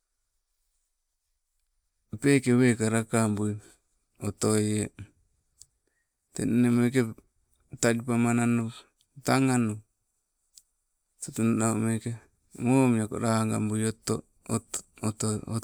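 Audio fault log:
No faults are heard in this speech recording. The log has nothing to list for any part of it.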